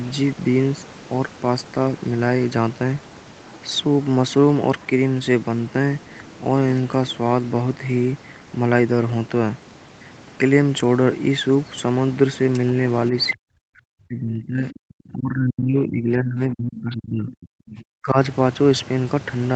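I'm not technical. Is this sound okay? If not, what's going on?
No. Speech suppressed in double talk happens from 13.32 to 18.17 s. For about five seconds the voice drops away, at its worst almost to silence. This is likely because both sides spoke at once. The call's echo canceller, which removes sound coming back from the other person's loudspeaker, couldn't tell the real talker apart from that echo. So it turned everything down until the overlap ended.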